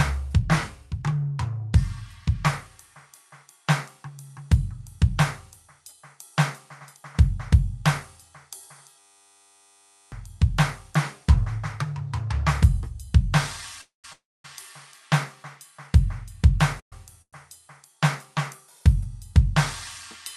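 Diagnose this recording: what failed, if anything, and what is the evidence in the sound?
The first failure is a system hang loop at the driver or buffer stage. From 8.99 to 10.12 s the music turns into a steady buzz at 100 Hz. That's one 10 ms chunk replaying over and over, about 113 times, which fits a tiny ring buffer cycling on its own while the host was frozen. When it recovers, the music has skipped ahead, with roughly a second of it gone.

Then there are four call audio freezes in the call path: 13.81–14.05 s, 14.13–14.45 s, 16.80–16.93 s and 17.22–17.34 s. Each time the last bit of sound is stretched into a short tail that fades out to silence. Most of each fill is quiet, about 140, 240, 100 and 60 ms. The music then picks up exactly where it stopped, so nothing is lost, but each pause adds delay of about 224, 314, 120 and 108 ms. That points to a likely jitter-buffer underrun caused by late packets. 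The high end tops out near 12 kHz, which is consistent with a super-wideband Opus call path.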